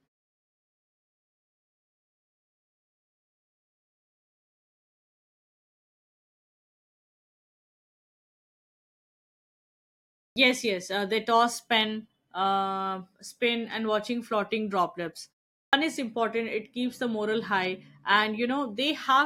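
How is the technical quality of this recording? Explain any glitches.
The recording's quality is hurt by one repeated glitch, a clipped start after a pause, at 10.26 s and 15.64 s. The output device goes to sleep during silence and is slow to wake, swallowing about 100 ms and 90 ms respectively. Sound after the long opening silence, and "is important" after "and watching floating droplets", starts abruptly with its first sounds missing.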